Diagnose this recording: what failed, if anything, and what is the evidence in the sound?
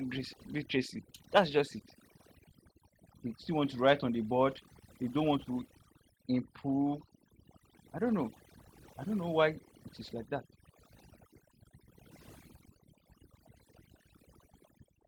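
Overdone noise removal in the call processing runs the whole way through: the background breaks up into twinkling specks where it was gated away.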